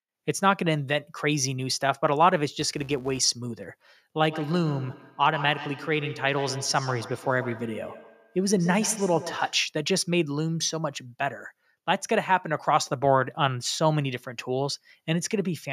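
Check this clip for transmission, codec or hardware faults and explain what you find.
Two faults are present in this speech clip.

From 2.49 to 3.29 s there is a filter restarted on every block. The filter drops its state at each block boundary and restarts from silence, so every block opens with a small transient. This produces a 200 Hz buzz that rises and falls with the speech level, which fits blocks about 5 ms long. On a spectrogram it shows as evenly spaced vertical lines and harmonics of 200 Hz. In the waveform it appears as regular tiny spikes.

From 4.28 to 9.73 s there is feedback echo between two devices. One device plays the other's audio into the room, that microphone picks it up again, and neither echo canceller removes it. Each word returns after roughly 150 ms, peaking about 13 dB below the speech. A spectrogram shows faint copies of each syllable trailing behind the original at that spacing.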